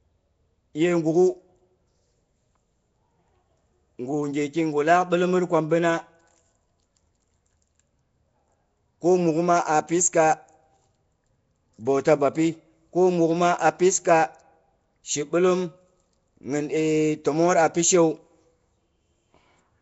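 From start to finish the speech carries a rough, hissy halo and a smeared, underwater quality, with nothing above 7.7 kHz, the sound of Nellymoser compression, likely from Flash's Nellymoser Asao codec at a rate near 32 kbps. Its fixed two bits a sample across 256-sample blocks leave weak bands empty and fill them with noise. That steady noise-fill grit sets it apart from the watery, bubbling swirl of low-bitrate MP3.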